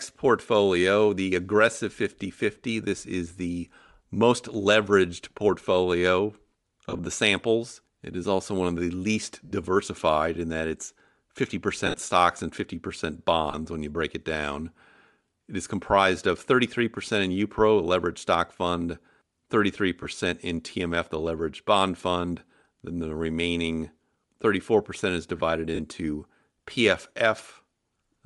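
Bluetooth LC3 compression colours this speech recording from start to finish: the upper spectrum sounds thinned and partly replaced by noise, giving consonants and vowels a breathy, grainy edge that is plainly audible. That character points to a low-latency transform codec working with 10 ms frames at a modest rate, which fits roughly 48 kbps, so an LE Audio link is the likely cause. Lost LE Audio frames break in at 6.89–6.99 s, 9.45–9.52 s, 11.87–11.99 s, 13.51–13.54 s, 20.03–20.05 s and 25.75–25.80 s. In each gap the decoder fills the missing time by repeating the last spectrum with scrambled phase, so the sound turns into a short noisy smear rather than a clean dropout. The gaps last between 20 and 70 ms, in steps that fit 10 ms frames. The losses at 6.89 s and 11.87 s are scattered over 100 to 120 ms, with the longest unbroken run about 40 ms.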